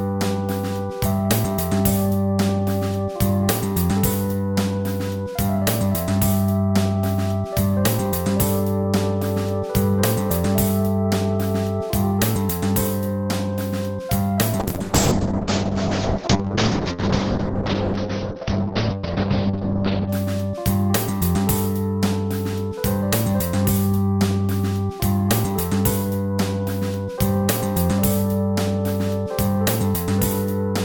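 A call bitrate drop runs from 14.6 s to 20.15 s. The connection's bandwidth estimate collapsed, so the encoder was forced onto a tiny bit budget. The sound shifts from the full-band, near-transparent quality of a high-rate stream to the coarse, watery texture of one starved down to a few kilobits per second. For about 5.5 s the audio band shrinks from 20 kHz to 6 kHz, so everything turns muffled and rough until full quality returns.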